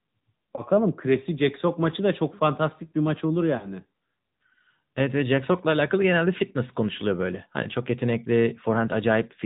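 Throughout, the speech carries AMR narrowband mobile codec damage. Nothing above 4 kHz survives, so the voice sounds boxed in. The vocal-tract model leaves a plainly audible buzzy, synthetic edge, which fits a mid-rate setting near 10.2 kbps.

Lost AMR speech frames break in twice. From 0.56 to 0.62 s there is a brief dip or warble, consistent with one missing 20 ms frame. From 3.58 to 3.69 s the gap is longer, pointing to about two frames. Each time the decoder repeats its last good settings at falling gain, smearing the sound before it recovers.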